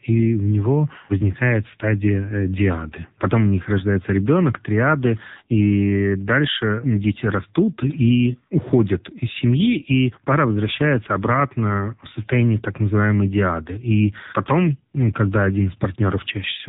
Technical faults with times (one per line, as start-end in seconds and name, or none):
0.00-16.68 AMR narrowband mobile codec